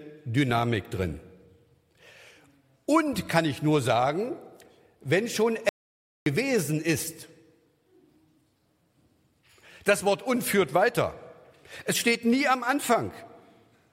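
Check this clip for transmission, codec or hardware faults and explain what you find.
One fault is audible. Audio dropout to silence, 5.69 to 6.26 s: the sound cuts off abruptly into 0.57 s of silence with no room tone, likely from a lost input link.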